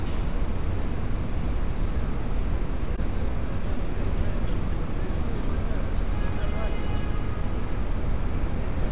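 Between 2.96 and 3.94 s there's a patch of scattered short gaps: a handful of packets, around four, went missing or turned up late, and the receiver papered over each one by stretching out the sound it had just played. The holes are tiny, the longest around 15 ms, with about 50 ms patched in total, so you hear quick ticks and little smeary hiccups. Everything after that lands about 8 ms late. The band-limited G.711 call sound, with nothing above 4 kHz, runs right through it.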